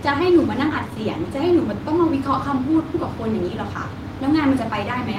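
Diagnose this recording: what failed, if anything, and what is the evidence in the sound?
The fault is at the network stage. Short concealed packet loss occurs from 0.69 to 0.72 s. About 20 ms of the speech stream did not reach the decoder in time. The receiver covered the hole with 10 ms of concealment, extending the sound that came just before it, then blended back into the real audio. The evidence is a brief smear or wobble in the speech at that point.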